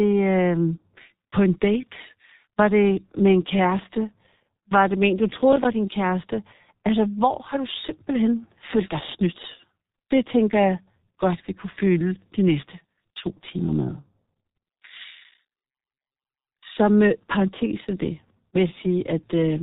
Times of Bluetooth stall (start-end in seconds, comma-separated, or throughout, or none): none